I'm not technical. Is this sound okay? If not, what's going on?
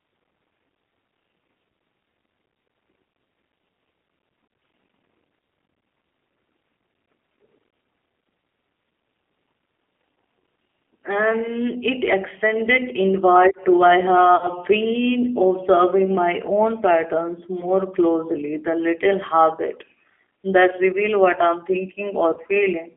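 No. The whole recording has gone through the G.729 codec, the squeezed-down format used for many internet phone calls. It keeps only the band of a telephone line, so the voice sounds thin, slightly rough and a little synthetic the whole way through.

There are also three short dropouts where VoIP packet loss was concealed by the speech codec. These come at about 14.36 s, 17.60 s (between "observing my own patterns" and "closely the little habit"), and 22.34 s. Pieces of the call went missing, and the decoder filled each gap by stretching the last sound it had into a brief buzzy tone or a coloured noise that fades. The voice stays a little weak or smeared for a moment afterwards.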